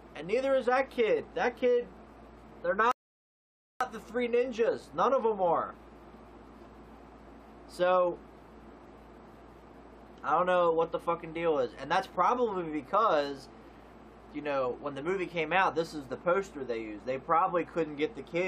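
At 2.91 s the sound cuts to silence and stays there until 3.81 s. This is a rebuffering stall. The player ran out of downloaded audio and waited for more. Playback then resumes exactly where it stopped. Nothing is missing, but about 0.89 s is added.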